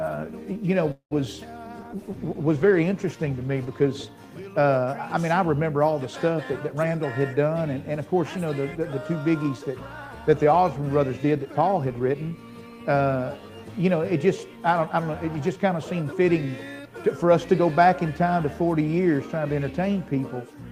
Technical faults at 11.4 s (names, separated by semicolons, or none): jitter buffer speed-up